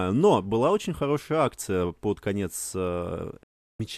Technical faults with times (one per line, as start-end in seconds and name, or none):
3.43-3.80 digital broadcast dropout